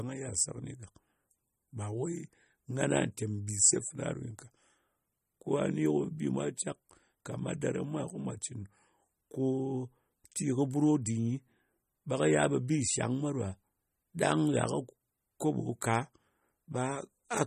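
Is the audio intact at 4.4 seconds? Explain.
No. At 4.4 seconds the speech carries MP3 compression damage that runs through the whole clip. Nothing is present above 14.5 kHz, and the damage is plainly audible, which fits a low bitrate around 32 kbps. With so few bits, the encoder likely cut the treble at a fixed frequency and zeroed weak frequency lines that switch on and off between frames, giving a watery, swirly texture, metallic chirps on s sounds and smeared attacks.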